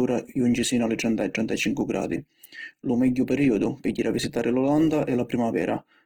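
Opus compression runs throughout the speech, plainly audible as grainy, rough texture with a noisy edge. The likely cause is Opus in its CELT music mode at a low rate fitting about 16 kbps, keeping full bandwidth up to about 20.2 kHz while filling starved bands with folded or noise-like energy.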